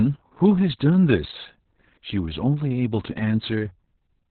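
Opus voice compression affects the whole speech clip. Nothing remains above 4.3 kHz, so the sound is narrowband and muffled. The SILK coder has coded the excitation very coarsely. Speech comes out hoarse and slightly robotic. The heavy damage fits a bitrate around 6 kbps.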